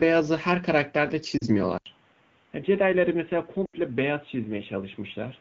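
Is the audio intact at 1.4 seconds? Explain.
No. From 1.37 to 1.44 s, about 40 ms, there are lost AMR speech frames, which fits two consecutive 20 ms frames failing their checksum. The wideband decoder fills the gap by reusing the last good pitch and vocal tract settings while lowering the gain, so the speech fades to near silence before recovering a little rough. This fading concealment differs from a hard dropout, where the sound would simply cut to silence.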